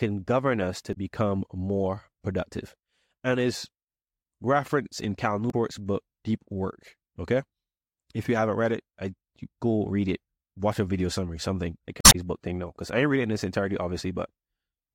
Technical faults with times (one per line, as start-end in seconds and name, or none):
0.90-0.97 damaged data in a compressed stream
5.47-5.54 damaged data in a compressed stream
12.00-12.15 damaged data in a compressed stream